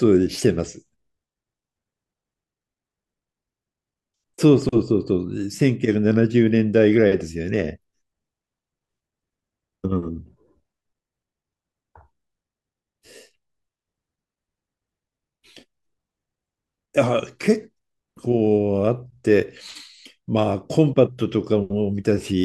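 No technical faults can be heard anywhere in this recording.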